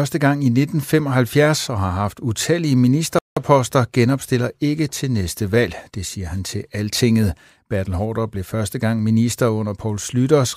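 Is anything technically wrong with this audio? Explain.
Yes, there's a playback stall from 3.19 to 3.37 s, right after "og har haft utallige": the speech drops out for about 180 ms, likely because the player ran dry, then resumes with "genopstiller ikke til næste".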